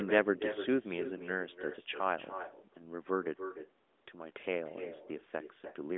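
Echo with no canceller runs through the whole of this speech recording: every phrase is trailed roughly a third of a second later by a quieter copy, about 9 dB down, sounding thinner than the direct voice. The far end is playing the call over a loudspeaker, its microphone picks that sound up, and with no echo cancellation the talker's own voice returns after the network round trip, heard over a narrowband mobile line that stops near 3.8 kHz.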